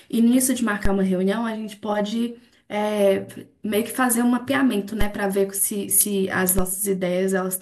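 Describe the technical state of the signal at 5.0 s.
At 5.01 s there's a DC step: the waveform's zero line jumps by about -10 dBFS, giving a low thump, then drains away through a roughly 5 Hz high-pass while the speech carries on.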